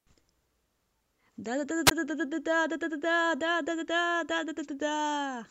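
At 1.86 to 1.91 s, a wireless microphone squelch dropout: hiss rises as the radio fades, then a 14 ms muted hole. That hiss sets it apart from digital dropouts.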